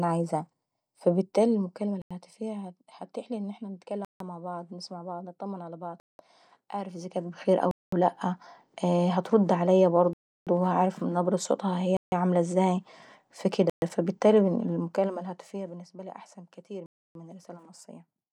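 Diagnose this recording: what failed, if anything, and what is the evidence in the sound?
Zipper noise: the playback gain stage stepped the level instead of smoothing it. That produces a ticking about 40 times per second as the level falls about 15 dB at 1.07–2.60 s, before "هتتيحلي ان احنا", rises about 15 dB at 6.82–7.47 s, before "ولا لاءة", and falls about 20 dB at 14.61–15.89 s.

Bluetooth stall: the wireless playback buffer ran dry, likely from interference delaying packets. The speech cuts to silence at 2.02, 4.05, 6.00, 7.71 (just before "ولا لاءة"), 10.13, 11.97, 13.70 and 16.86 s. The gaps last 88 to 334 ms, and the speech picks up again after each one.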